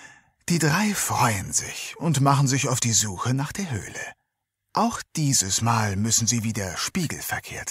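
No technical faults can be heard anywhere here.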